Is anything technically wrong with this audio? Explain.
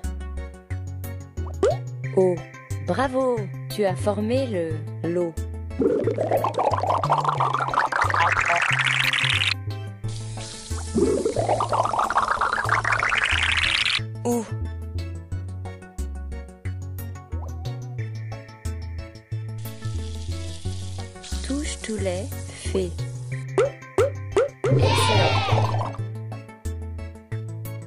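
No, nothing technically wrong can be heard here; the clip is free of faults throughout.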